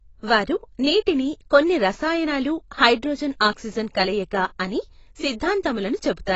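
AAC compression runs through the whole speech clip. Nothing reaches above about 7.9 kHz, so the top octave that carries crispness and air is gone, and the sound is dull and closed-in. The coding damage is plainly audible: the encoder has quantised the spectrum coarsely against its hearing model, smearing detail across each frame. The sound points to AAC-LC at a low rate, likely around 24 kbps.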